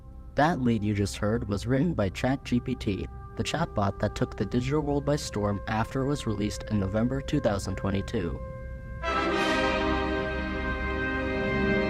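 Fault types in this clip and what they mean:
No technical fault is audible anywhere in the clip.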